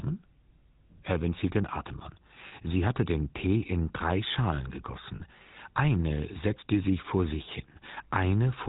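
Throughout the clip the speech carries the buzzy, gravelly grain of the GSM full-rate codec, which fits a 13 kbps coder. It models the vocal tract and excites it with a coarse pulse train, and nothing above 4 kHz survives. Unlike plain low-pass muffling, the damage here is a rasp on voiced sounds rather than just dullness.

Lost GSM frames interrupt the speech at 2.48 to 2.53 s and again at 5.16 to 5.22 s. Each loss lasts about 40 ms, which fits two dropped frames. The decoder repeats the last good frame, so the sound briefly holds as a metallic ring instead of dropping into a silent gap or a click.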